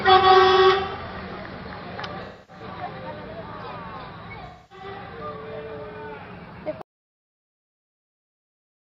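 At 2.24 s and again at 4.45 s there is AAC frame loss with concealment. Each patch turns smeared and noisy for about 0.4 s, ending at 2.63 s and 4.86 s, because about a quarter second of coded audio is missing, which fits roughly six frames. The decoder covers the gap by reusing the last good spectrum with randomised phase. On a spectrogram each patch shows as a blurred, flattened band of repeated energy with no fine detail, and the waveform shows a noise-like stretch.

From 6.82 s to the end the sound cuts off abruptly into an audio dropout to silence. The gap is silent with no room tone, most likely because the input was lost while the recorder kept writing. The waveform becomes a flat line, and the spectrogram goes dark through to the last frame.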